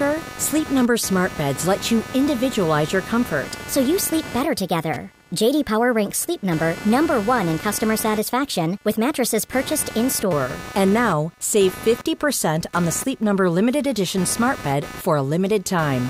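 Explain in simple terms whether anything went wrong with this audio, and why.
Computer activity noise runs through the whole recording, a buzzy, chirping layer pulsing roughly 300 times a second and sitting below the speech. The computer's processor, graphics card or even mouse movements draw changing amounts of power, and that disturbs the shared electrical ground the audio circuit relies on. The noise therefore rises and falls with what the computer is doing, not with what is being said.

A section at the wrong speed runs from 3.45 to 10.33 seconds, starting right after "let you individualize your". For those seven seconds the speech plays 1.17 times too fast, so the voice sounds hurried and about three semitones higher, then snaps back to normal. Speed and pitch shift together because the audio is simply being played back quicker. The likely cause is an editor or player matching this stretch to the wrong clock.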